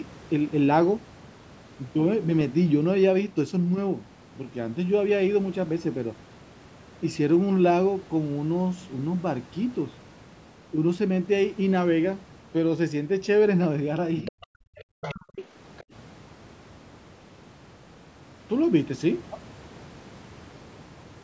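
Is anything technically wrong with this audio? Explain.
Yes. The speech twice dips sharply while a second, fainter voice breaks through underneath it.

Speech suppressed in double talk, from 14.23 to 14.34 s and again from 14.61 to 15.27 s: the speech collapses by roughly 40 dB, briefly in the first case and for most of the second span. The likely cause is that both parties spoke at once and the echo canceller, unable to tell the local talker from loudspeaker echo, pulled everything down.

The other side's voice leaking through, at 14.25 to 14.47 s, 15.02 to 15.14 s, 15.36 to 15.44 s and 15.77 to 15.83 s: short scraps of another voice sit behind the speech, around 15 to 20 dB below it in the first three and much fainter, near 30 dB down, in the last. This is likely far-end audio from the device's loudspeaker that the echo canceller failed to remove fully from the microphone signal. The call's microphone processing also limits the audio to nothing above 8 kHz.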